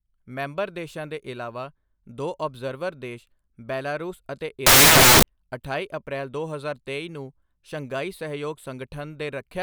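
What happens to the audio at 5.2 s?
At 5.2 s the speech is near the end of a burst of samples built from the wrong bytes, running from about 4.66 s to 5.23 s. Each sample's bytes are assembled wrongly, so the rapidly changing low bits end up as the most significant part of the value. The result is loud, harsh broadband noise in place of the speech. On a waveform the span fills with dense noise, and a spectrogram shows flat broadband energy across all frequencies.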